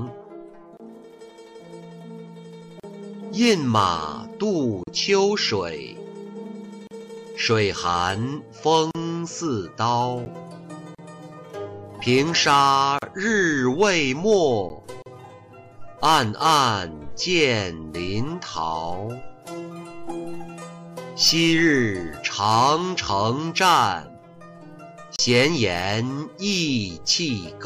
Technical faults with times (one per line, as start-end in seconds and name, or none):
0.77-0.80 gap at a join of encoded pieces
2.80-2.83 gap at a join of encoded pieces
4.83-4.87 gap at a join of encoded pieces
6.87-6.91 gap at a join of encoded pieces
8.91-8.95 gap at a join of encoded pieces
10.25 block of digital silence
10.95-10.98 gap at a join of encoded pieces
12.98-13.02 gap at a join of encoded pieces
14.69 block of digital silence
15.02-15.06 gap at a join of encoded pieces
25.16-25.19 block of digital silence